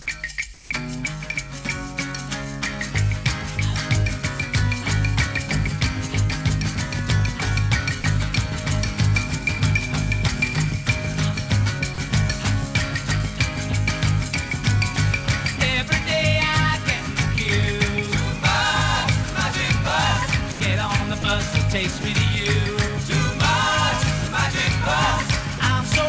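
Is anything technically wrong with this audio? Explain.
Yes. From 0.54 to 0.70 s, the background, sitting about 22 dB below the loudest passages, is replaced for 160 ms by a smooth, featureless hiss about 2 dB quieter. This is comfort noise in place of the background, likely from discontinuous transmission, where the sender paused and the receiver synthesized shaped noise.

The sound itself drops out briefly six times, at 8.02–8.04 s, 11.94–11.98 s, 20.52–20.60 s, 21.22–21.24 s, 22.02–22.04 s and 25.58–25.60 s, for 20 to 80 ms each, with steady noise filling the holes. This is sound dropped by the voice detector, likely because quiet moments were mistaken for background and sending stopped. The call path's G.722 coding also cuts off everything above 8 kHz.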